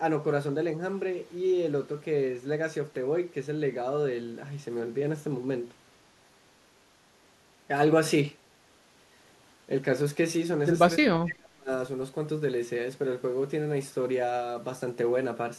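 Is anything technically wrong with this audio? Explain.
Yes. From 10.98 to 11.7 s the speech is pulled down hard, sinking at its deepest by around 35 dB. This is likely speech suppressed in double talk: with both ends talking at once, the echo canceller couldn't tell this talker from returning loudspeaker echo and attenuated everything. Unlike a packet-loss dropout, which makes abrupt gaps or robotic fills, this is a gain dip that follows the overlap.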